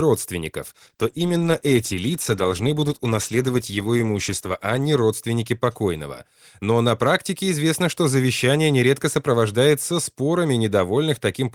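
A call bitrate drop runs from 0.66 to 5.37 s. The call's bandwidth estimate fell, and the encoder coarsened its coding. The speech turns rough and muffled for nearly four seconds, which fits a halving from about 32 to 16 kbps, before clarity returns.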